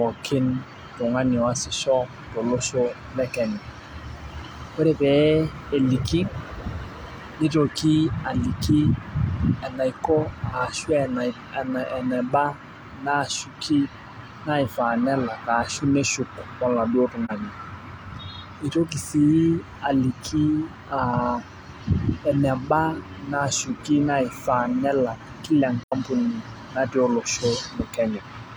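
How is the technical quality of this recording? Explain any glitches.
The recording has two brief dropouts from AAC frame loss with muting. At 17.25 to 17.31 s the speech fades into a short hole, which fits one lost frame of about 43 ms. At 25.83 to 25.93 s a longer gap fits two frames. The decoder zeroed the missing spectrum, so overlapping windows fade the sound out and back in.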